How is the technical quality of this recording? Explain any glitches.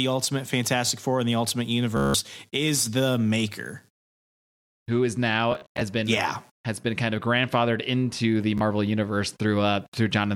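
Three glitches, all Bluetooth stutter, at 1.97 to 2.14 s, 5.52 to 5.81 s, and 8.58 to 8.61 s. Data arrived late or not at all, so the receiver replayed its last short slice. The first gap becomes a buzzy, machine-gun stutter; the others are brief repeated slices. The speech then resumes further on.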